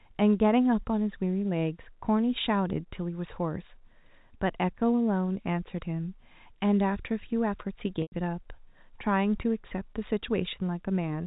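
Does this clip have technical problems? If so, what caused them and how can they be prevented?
Yes. From 8.02 to 8.12 s there is packet loss with pitch repetition. About 100 ms of audio went missing, which fits five lost 20 ms packets. The receiver filled the gap by looping the last pitch period and fading it out, so the sound briefly holds with a buzzy quality. On a spectrogram of this G.711 telephone-band audio, the harmonics freeze into evenly spaced horizontal stripes that dim toward the end of the gap. On the waveform, one cycle repeats with shrinking amplitude. Forward error correction or redundant packet transmission, together with an adequately sized jitter buffer, would prevent this dropout.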